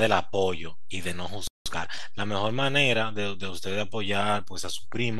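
A speech recording in which the sound cuts out abruptly at 1.47 s and stays silent for about 0.18 s, until 1.66 s. This is a playback stall, likely the player running short of data or its output thread being blocked. When the sound returns at 1.66 s, it rushes ahead at about 1.5 times normal speed until 2.02 s, with its pitch unchanged. That is time-compressed catch-up: the player trims its backlog by dropping small slices and cross-fading across the joins. Throughout the whole clip the waveform sits off its zero line by a constant amount, which is DC offset. It can't be heard as a sound in itself. It shows up as steady energy at the very bottom of the spectrum and takes away some of the available headroom.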